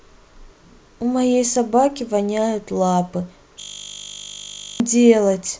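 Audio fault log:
3.6–4.8 s, system hang loop: the speech becomes a steady 50 Hz buzz as one 20 ms fragment repeats 60 times, and about a second of audio is lost. The system froze while the hardware kept replaying a ring buffer of about 20 ms.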